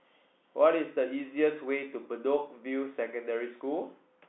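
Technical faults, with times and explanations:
No technical faults can be heard in this speech. It comes through a telephone line with G.711 coding, so the sound sits in a narrow band of about 250 Hz to 3.6 kHz, with nothing above about 3.8 kHz.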